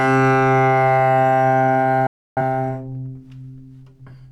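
A digital broadcast dropout runs from 2.07 to 2.41 s. The receiver stopped getting decodable frames and muted, fading out in 3 ms to silence. About 0.3 s of sound never arrives, which fits several lost frames, before audio resumes further along.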